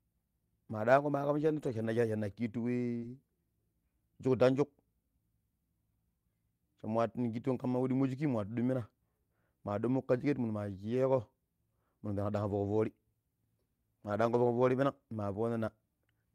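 Speech, with packets lost in transit. Some were rebuilt from error correction, so the decoder played low-bitrate copies carried in later packets. Those passages sound rougher and noisier with no gap, at 1.37–1.87 s, 3.02–3.16 s, 7.68–7.74 s (just before "we ɗummo shiki nwatu"), 10.90–10.96 s, 12.36–12.78 s, 14.10–14.40 s and 14.92–14.98 s. One short concealed packet loss, about 40 ms at 2.97–3.04 s, never arrived in time. The receiver extended the preceding sound to fill it, giving a brief smear.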